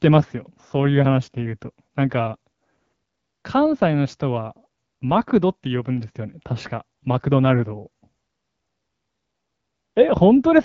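Nothing stood out on listening to this speech, which comes through an AMR wideband (HD Voice) codec path working as expected.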